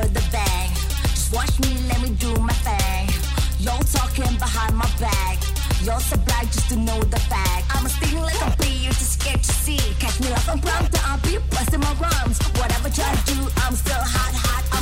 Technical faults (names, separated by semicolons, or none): none